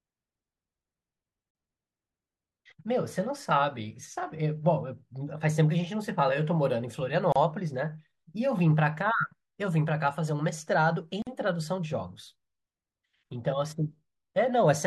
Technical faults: gap at a join of encoded pieces

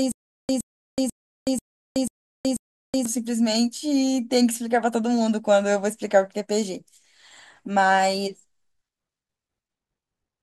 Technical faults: stutter with silent gaps

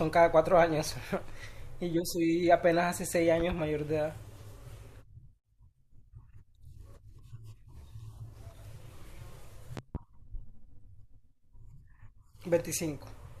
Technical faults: loud pop

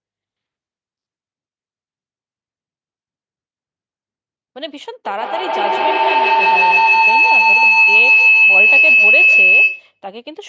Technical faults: feedback howl

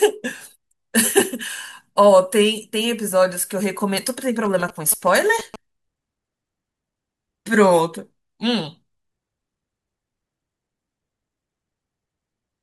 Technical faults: GSM signalling bursts

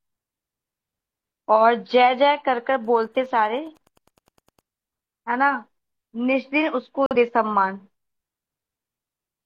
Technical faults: Wi-Fi interference; corrupt frame muted

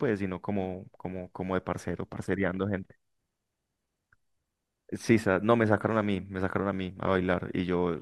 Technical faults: none

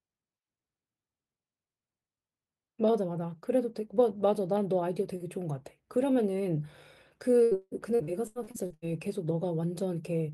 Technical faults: repeated packet loss (robotic sound)

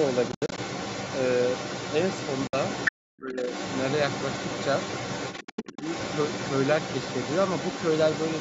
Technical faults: other side's voice leaking through; Bluetooth dropout; speech suppressed in double talk

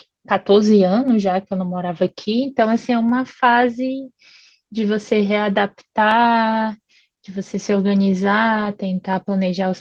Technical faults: lost packet rebuilt from error correction

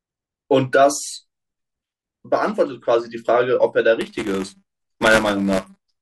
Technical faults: buffer tearing

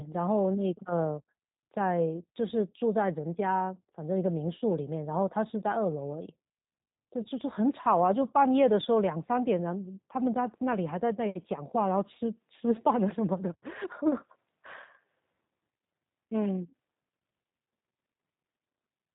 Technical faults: G.729 codec; VoIP packet loss concealed by the speech codec

